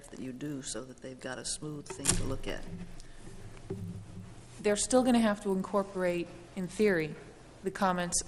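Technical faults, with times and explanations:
Throughout, resampler restarted on every block: a buzz at 50 Hz rides on the sound, which fits an upsampling from 24 kHz to 48 kHz done in separate 20 ms blocks, each converted with no knowledge of its neighbours, so every block edge carries a small error. Unlike 50 Hz mains hum, the buzz is present only while there is signal and drops away in quiet passages, and it has a clicky, gated texture rather than a smooth tone.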